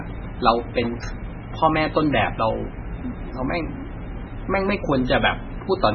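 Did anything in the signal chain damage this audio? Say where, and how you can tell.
Yes, at the codec stage, likely MP3 compression. Throughout the speech, nothing sounds above 6.5 kHz, and what remains is watery and swirly as weak frequency lines flicker between frames, pointing to a very low bitrate near 16 kbps. A plain low-pass filter would dull the sound without that swirl.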